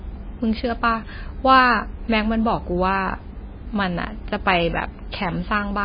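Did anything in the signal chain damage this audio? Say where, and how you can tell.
Yes, at the codec stage, and it affects the whole speech clip. The treble stops dead at 5 kHz, and the sound has a watery, swirling quality with smeared attacks throughout. The likely cause is heavy MP3 compression at a very low rate, around 20 kbps. Starved of bits, the encoder discards everything above a fixed cutoff and zeroes weak frequency lines that flicker on and off between frames. On a spectrogram this appears as a flat ceiling at 5 kHz with patchy, speckled gaps below it.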